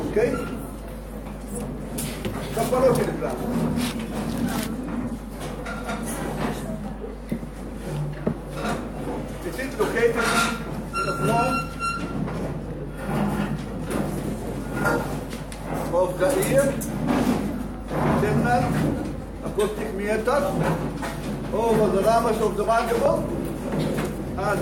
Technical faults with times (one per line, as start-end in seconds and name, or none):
0.00-24.62 mains hum